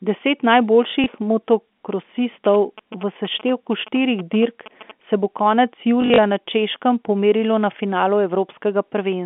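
Speech over a G.711 telephone line, band-limited to about 200 Hz to 3.5 kHz, with two kinds of fault. Packet loss with the last packet repeated occurs at 1.04 to 1.06 s, a 20 ms gap consistent with one lost packet, and again at 6.02 to 6.18 s, just after "se bo konec". In that second stretch about 100 ms is missing, scattered over 160 ms, with the longest run 40 ms. The receiver replays the previous audio, and the longer run gives a brief robotic stutter. GSM signalling bursts run from 2.45 to 4.91 s, ending just before "se bo konec". A nearby 2G phone transmitting short groups of radio bursts is rectified by the audio circuitry, giving a galloping pattern of short 217 Hz buzzes roughly 15 dB below the speech.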